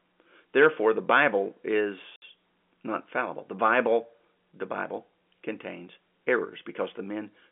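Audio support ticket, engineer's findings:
Dropout, speech signal, 2.16 to 2.22 s: 60 ms hole of silence with hard edges. Probable component: network/jitter buffer. Packet loss filled with silence. Receiver played silence for missing frames instead of concealment; gap length fits three 20 ms packets. Narrowband telephone-line sound, roughly 250 Hz to 3.4 kHz, from G.711 telephone coding, present throughout and not implicated in the dropout.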